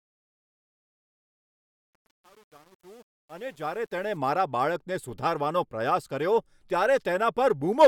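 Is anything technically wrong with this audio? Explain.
Yes, there's truncation distortion on the fade-in from the start to about 4.17 s, worst up to 3.85 s. The level stage drops too many bits without dither, which fits an 8-bit path, so the quiet speech turns gritty until the fade reaches full level.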